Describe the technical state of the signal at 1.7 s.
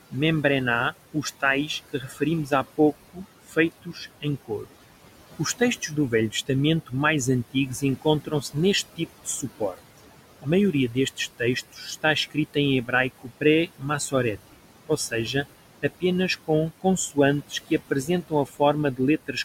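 At 1.7 s the noise suppressor is misjudging parts of the speech as noise. This falls inside a stretch of speech cut by the noise suppressor that runs from 0.11 s to 4.72 s. Within that window the suppressor's per-band gain treats some quiet speech energy as steady background and pulls it down with the room noise, by about 18 dB at its deepest. The affected portions add up to well under a second across the span. Soft consonants and word endings around this point sound swallowed, faint or clipped short rather than fully formed.

Underneath, noise suppressor artifacts are present here as everywhere in the clip. The suppressor lowers the bands it reads as steady noise by about 17 dB, frame by frame. The room noise sits roughly 15 dB below the speech, and it dips in the gaps and rises back beneath the speech.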